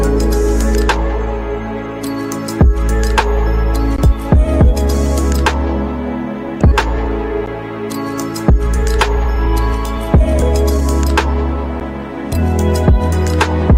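Throughout the clip, quiet passages sound grainy and gritty, with distortion that follows the sound. The likely cause is low bit depth without dither: rounding to roughly 10 bits leaves an error around 50 dB below the signal.

At 6.71 to 6.73 s, playback jumps abruptly forward with no gap. This skip ahead dropped about a second of audio and joined the two sides almost directly.

From 8.50 to 10.35 s, the sound runs slightly hurried at unchanged pitch. This jitter buffer speed-up plays at 105% and trims short pitch-period pieces, removing about 100 ms in total. At 10.74 to 10.82 s, a much faster burst at 194% squeezes out roughly 70 ms.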